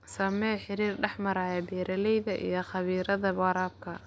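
No technical faults occur at any point in the recording.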